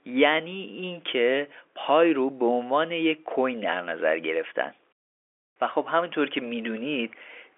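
No technical faults are present in this speech, which carries the narrow 300 Hz to 3.5 kHz band of ordinary G.711 telephone coding, with nothing audible above about 3.7 kHz.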